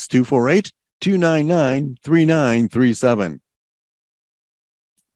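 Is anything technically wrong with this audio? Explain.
Yes. From 1.67 to 1.77 s in this speech there is a lost packet rebuilt from error correction. Lost packets were replaced by low-bitrate backup copies carried in later packets, so there's no gap, just a brief rough, noisy patch. The waveform stays continuous, while the spectrogram shows blurred harmonics over about 60 ms, consistent with three 20 ms frames.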